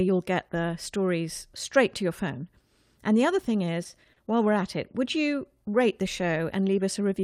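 Between 3.53 and 4.56 s, after "the other" and before "it would you", the speech catches and drags in nine brief holds, the longest about 33 ms, adding roughly 108 ms in total and about 11 percent of that stretch. Nothing drops out. It just stutters forward. These are repeated stalls (stutter): packets arrived late, the jitter buffer kept running dry, and the receiver extended the last sound each time until fresh audio arrived.

From 5.49 to 6.38 s, just after "it would you", the speech slows to about 93 percent of normal speed while the pitch stays the same, so sounds are drawn out and the passage gains about 68 ms. This is a jitter buffer slow-down: with its reserve low, the receiver repeated single pitch periods or fragments of pauses to rebuild the buffer, stretching the audio rather than stalling it.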